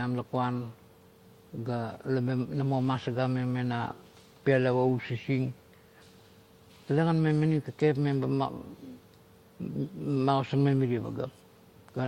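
No technical faults are audible.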